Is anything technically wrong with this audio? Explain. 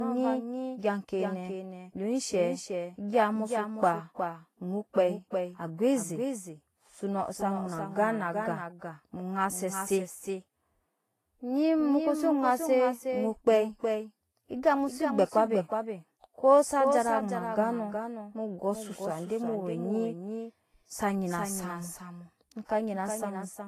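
Yes, two problems run through the whole speech clip.

First, there's a doubled audio track: a second full-band copy trails roughly 0.4 s behind, a few dB quieter, with no room decay. It's likely a slower second capture path feeding the same mix, so everything sounds stuttered and echoey.

Second, it's low-bitrate audio saved at a high bitrate. Nothing sits above 14.2 kHz, and there's a smeary, swirly codec texture. That likely comes from a low-rate encode, something like 30 kbit/s, later re-saved as a roomy MP3 that couldn't restore anything.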